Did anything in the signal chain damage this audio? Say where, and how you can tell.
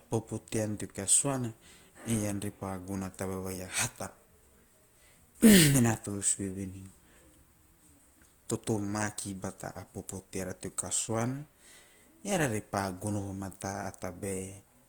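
Yes, at the codec stage. The speech is grainy and rough throughout yet still reaches about 20 kHz, likely Opus compression, roughly 24 kbps, noise-filling starved bands.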